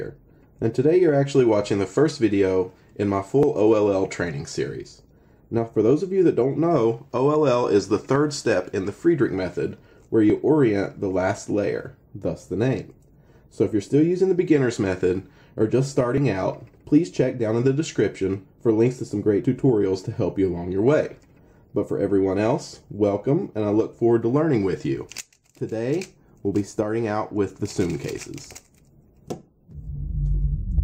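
Likely dropped buffers (overrun) at 10.30, 16.18 and 19.45 s: the sound jumps ahead, roughly 5 to 10 ms skipped each time.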